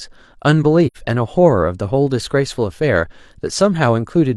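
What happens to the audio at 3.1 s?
Nothing goes wrong at 3.1 s; the speech continues intact through that moment, with no dropout, click or distortion.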